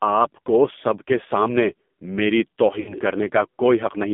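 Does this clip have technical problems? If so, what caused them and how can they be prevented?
Yes. The AMR narrowband mobile codec is active throughout. The speech is confined to about 200 Hz to 3.6 kHz and sounds heavily buzzy and synthetic, consistent with a low AMR-NB mode near 5.9 kbps that encodes the voice as a coarse vocal-tract model with few excitation pulses. To prevent this, use a wideband codec or a higher AMR mode end to end.

Lost AMR speech frames occur from 2.80 to 2.95 s. The speech smears and then fades as the decoder repeats the last good pitch and filter settings at decreasing gain. The gap fits about four consecutive 20 ms frames that failed their checksum on the radio link. To prevent this, improve radio coverage or add redundancy and retransmission so corrupted frames are recovered.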